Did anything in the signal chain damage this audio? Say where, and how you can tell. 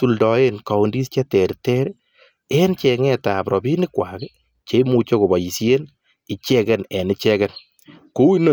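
No, nothing in this speech recording stood out on listening as a sign of damage anywhere in the signal chain.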